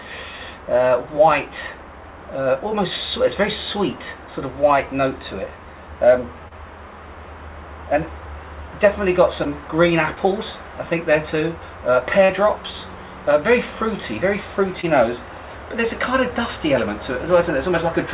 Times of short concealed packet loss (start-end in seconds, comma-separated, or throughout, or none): 6.48-6.53, 9.43-9.47, 10.15-10.19, 12.25-12.31, 14.81-14.85